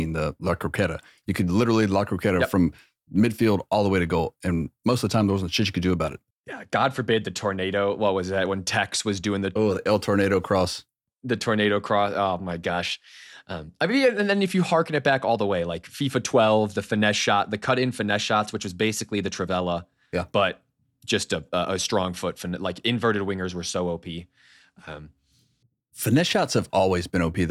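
No technical faults are audible.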